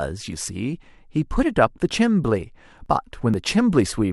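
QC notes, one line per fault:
0.48, 0.95, 1.91, 2.86 and 3.34 s, audio missing between chunks: the speech skips forward by about 20 ms at each point, with the two sides butted together and no silence between them, so it sounds like a tiny jump. The skips fall on a grid of roughly 0.48 s, likely from processing in half-second chunks and losing a sliver at each handover. Unlike random dropouts, nothing goes quiet, and the spacing stays regular.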